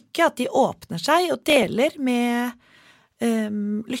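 From 1.43 to 1.67 s, a short burst of gritty crackle tears across the speech, then stops. This is processor overload crackle: the processor fell behind and missed around seven deadlines for very short audio buffers, each skipped outright, leaving hard-edged gaps.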